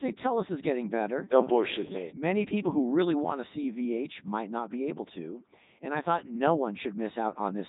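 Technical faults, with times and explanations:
Throughout: Codec 2 vocoder. The speech is resynthesised from sine waves driven only by pitch, voicing, energy and a spectral envelope, not the original waveform, so it sounds robotic and buzzy with nothing above 3.8 kHz. The heavy damage fits Codec 2's 3.2 kbit/s mode.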